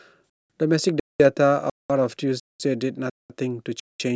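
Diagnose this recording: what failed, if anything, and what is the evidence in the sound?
Gap between chunks: the speech breaks into 200 ms silent holes with hard edges at 0.30, 1.00, 1.70, 2.40, 3.10 and 3.80 s, a strict 0.7 s cycle. That cycle is 0.5 s of sound plus a 0.2 s hole, so the fault sits at the playback or streaming stage. The audio arrives in half-second chunks, and each one starts late, leaving dead air at the join. No sound is cut away; the chunks are only pushed apart.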